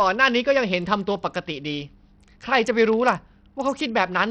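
From start to end the speech has a dull, flickering top end with gritty noise and aliasing riding on it, likely from Bluetooth SBC compression at a starved bit pool, which fits roughly 64 kbps, leaving the upper sub-bands with almost no bits.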